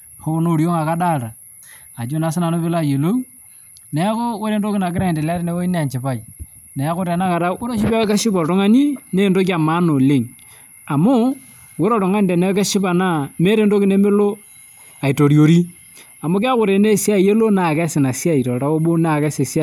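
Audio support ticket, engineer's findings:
Listened to the full speech clip; nothing stood out, no findings to log.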